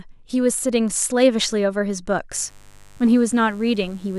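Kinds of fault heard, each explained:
Mains buzz: a steady, raspy buzz enters the speech at 2.32 s and runs to the end, sitting well below the voice. Sharp switching spikes on the 50 Hz supply spread harmonics up to several kHz, unlike plain hum's smooth, low tone.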